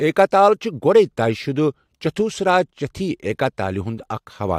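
No audible technical faults.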